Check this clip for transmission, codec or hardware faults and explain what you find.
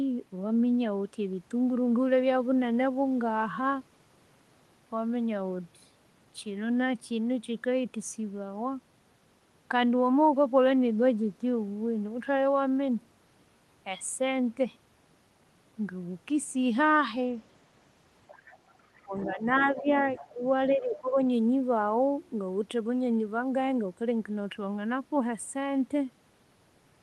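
Two related echo-control faults occur in a cluster between about 18.3 s and 21.2 s of this speech clip, heard over a call path whose audio stops near 12 kHz. Its coding character fits an Opus stream at around 24 kbps.

The first fault is the other side's voice leaking through, at 18.27–18.74 s, 18.97–19.31 s, 19.76–19.81 s and 20.16–20.33 s. A faint second voice sits roughly 20 to 25 dB under the main talker. It comes in short scraps. The likely cause is the far end playing on a loudspeaker, with residual echo getting past the canceller into the microphone.

The second fault is speech suppressed in double talk, at 19.02–19.44 s, 19.74–19.87 s, 20.33–20.44 s and 20.75–21.16 s. The talker's level dips by roughly 10 dB in most spots and by about 20 dB in the first, so the voice sounds pushed back. These dips overlap or closely follow the leaked voice. That pattern likely means the echo suppressor mistook simultaneous talk for echo and attenuated the whole signal.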